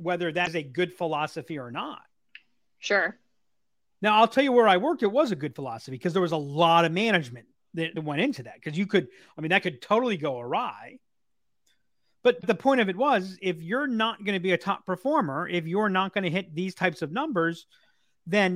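A brief glitch cuts into the speech three times: at 0.43 to 0.48 s, just before "a good philosophy or"; at 7.93 to 7.97 s, between "lot of management" and "went into that because"; and at 12.40 to 12.44 s, just before "the point of it". Each is damaged data in the compressed stream. Corrupted bytes made the decoder misread those frames and lose sync until it found the next valid frame header.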